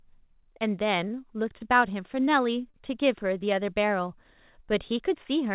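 Three short stalls from late packets show up in this speech, at 1.08 to 1.12 s, 1.58 to 1.62 s and 2.70 to 2.76 s. Each time a packet hadn't arrived when due, the jitter buffer ran dry, so the receiver held the last bit of sound for about 24, 19 and 37 ms. Then it picked up exactly where it left off. Nothing's lost, but each spot has a brief drawn-out moment with a faint buzz or dip. The sound throughout stops at 4 kHz, which points to a narrowband call codec.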